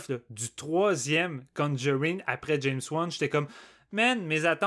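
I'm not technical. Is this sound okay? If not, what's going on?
Yes, this sound is okay; nothing is going wrong in it.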